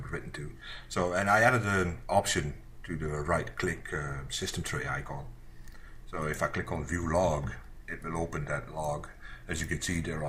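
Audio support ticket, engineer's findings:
No technical faults found on listening; the signal path shows no audible dropouts, distortion or timing problems.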